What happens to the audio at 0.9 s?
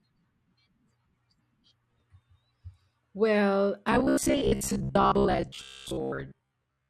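Nothing goes wrong at 0.9 s; the audio runs on intact through that moment, with no dropout, click or other fault.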